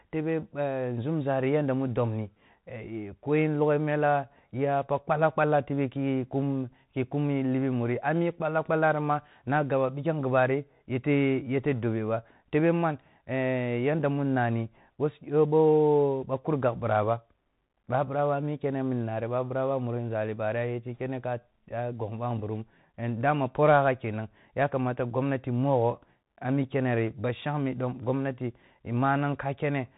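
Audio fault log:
Throughout, Bluetooth CVSD headset codec: the speech is cut off above about 3.8 kHz and carries a grainy hiss beneath it, while loud, bright sounds smear and s sounds turn scratchy. The codec sends one up-or-down bit per sample, which fits a 64 kbps stream, and its adaptive step cannot keep pace with fast rises. That slope distortion and granular noise separate it from a simple low-pass filter or wideband mSBC.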